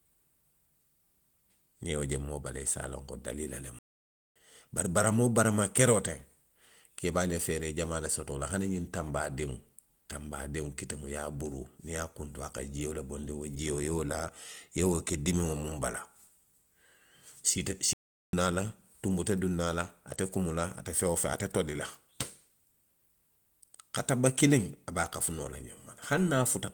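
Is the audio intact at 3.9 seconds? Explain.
No, the speech drops out after "a loŋ ko daliila" for about 0.57 s, 3.79 to 4.36 s: a playback stall, likely the player starving for data, then resuming.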